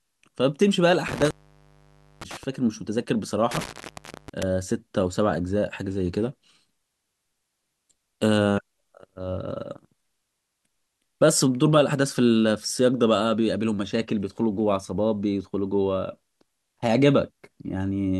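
At 1.08 s the speech drops out with crackle at both edges, an intermittent contact where a loose plug or cable briefly opens the line for about 0.91 s, leaving faint hiss until it recovers by 2.44 s. Same thing again from 3.51 s to 4.43 s, open for roughly 0.63 s.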